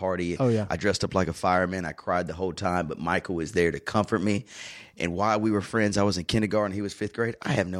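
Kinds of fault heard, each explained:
No technical faults are audible.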